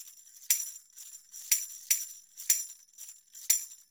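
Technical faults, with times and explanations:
1.13–2.49 s, doubled audio track: a second, full-band copy of the sound runs roughly 400 ms behind the original and at about the same loudness, so every event is heard twice. This is likely a second capture through a slower path, or an edit leaving two copies out of step. Unlike an echo or reverb, the copy has no decay, no room colour and no further repeats, and it switches on and off abruptly at the ends of this span.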